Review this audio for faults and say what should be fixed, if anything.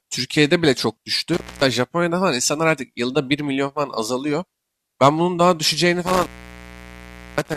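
Intermittent contact hits twice: the speech drops out from 1.34 to 1.65 s (about 0.25 s open) and again from 6.07 s right to the end at 7.57 s, with crackle at each edge as a loose plug or cable briefly breaks the circuit. Reseat and secure every connector, and swap out any suspect cable before the next take.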